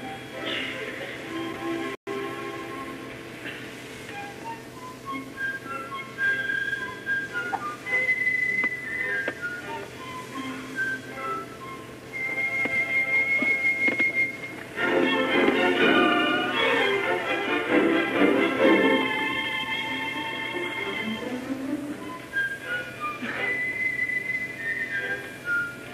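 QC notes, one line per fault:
1.95–2.07 s, playback stall: the sound stops dead in mid-flow for 120 ms, a clean gap of silence with no fade on either side, then carries on. The abrupt cut and equally abrupt return point to output that simply had nothing to play for that moment, not to anything in the source itself. This is likely the player's buffer running dry or its audio thread being held up, with output resuming once data arrived again.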